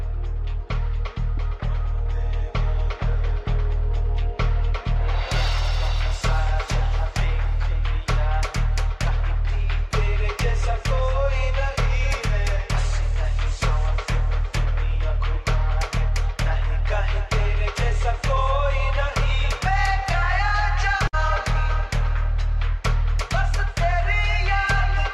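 At 21.07 s there is a burst of packet loss lasting until 21.15 s. Several packets never arrived in time. The receiver stretched the last sound for about 54 ms, fading it down. Playback then resumes with about 60 ms missing.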